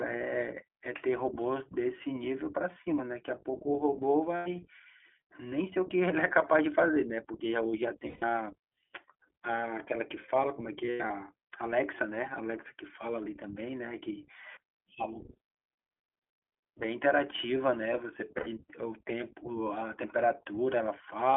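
From start to finish the speech passes through the iLBC codec, a narrowband VoIP coder that handles each frame on its own. The band is squeezed to roughly 300 Hz to 3.5 kHz, with nothing above that. The damage is plainly audible: voices sound thin, slightly rough and synthetic. The coarseness fits iLBC's 15.2 kbps mode with 20 ms frames.

Lost iLBC frames then cause four dropouts. At each one, packets failed to arrive, and the decoder filled the gap by repeating the last pitch cycle blended with noise. The first gap runs from 4.36 to 4.48 s (100 ms) and the second from 8.08 to 8.24 s (140 ms). Each sounds like a brief held, buzzy vowel. The third, from 10.86 to 11.11 s, is 160 ms of loss scattered over a quarter second, with the longest stretch about a tenth of a second, so it comes across as a stuttering, breathy smear. The last, 18.38 to 18.49 s (80 ms), is a short buzz. Because iLBC frames stand alone, the speech is right again almost at once after each gap.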